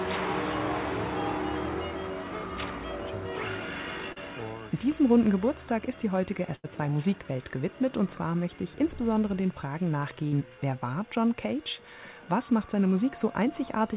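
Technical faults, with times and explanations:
4.12–4.19 s, short concealed packet loss: a brief smear, where the sound wobbles for a moment before blending back. About 40 ms of audio never reached the decoder in time, so the receiver stretched the preceding sound across the hole and then blended back into the real signal.
6.56–6.67 s and 10.28–10.35 s, burst of packet loss: the sound stalls into a held, fading continuation, then resumes further along. About 80 ms and 40 ms respectively were lost, so the receiver extended the last sound, turning it down as the gap ran on.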